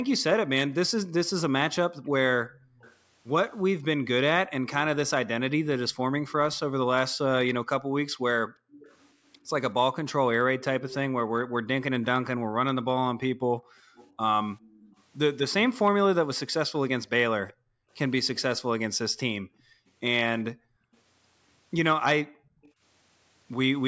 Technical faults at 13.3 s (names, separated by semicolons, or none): echo leak; background gated by the echo canceller